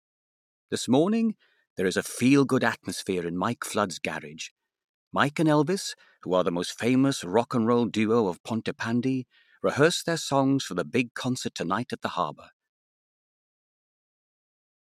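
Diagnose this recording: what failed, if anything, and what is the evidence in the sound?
Nothing here has failed; the only change worth noticing is the smooth fade-out an editor would add, easing the level down from around 13 s with no click or hard edge.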